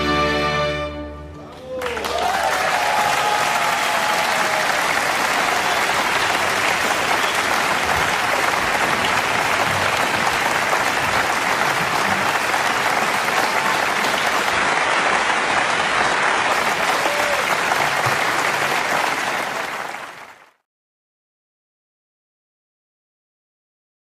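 At 14.52 s the audio suddenly shifts to an adaptive stream at a lower bitrate and stays there until 16.52 s. The treble above about 11.5 kHz vanishes and the top end turns thin, which points to a switch from a roughly 96 kbit/s AAC stream to a very low-rate HE-AAC one. Unlike a dropout or packet loss, there is no gap or stutter. The quality drops and recovers abruptly while the sound plays on continuously.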